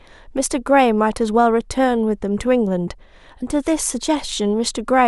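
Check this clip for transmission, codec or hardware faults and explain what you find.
No faults were found.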